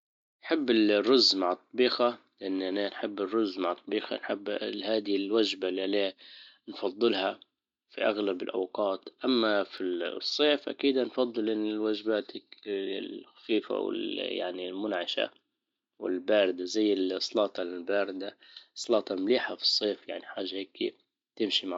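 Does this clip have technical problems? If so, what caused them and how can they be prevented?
Yes. Dropped samples cause two sharp clicks, at 9.78 s just before "الصيف اكيد نفضل الوجبات" and at 18.84 s after "والباردة زي السلاطة الباردة". A handful of samples, well under a millisecond, vanish, so the waveform jumps abruptly and the spectrogram shows a thin vertical line. The likely cause is a momentary buffer underrun in capture or transfer; larger buffers and a steady clock prevent it.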